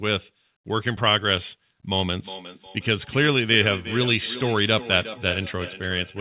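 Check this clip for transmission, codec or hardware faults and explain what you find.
One fault: feedback echo between two devices, running from 1.99 s to the end of the speech clip. From that point each phrase returns as a thin, ringing copy roughly four tenths of a second later. It reaches about 14 dB below the direct speech. Two devices in the same room share the call, and one plays back audio the other's microphone captured. The microphone hears it again, and neither device's echo canceller removes sound coming from the other device. The audio stops at 4 kHz, which fits G.711 mu-law on the call path.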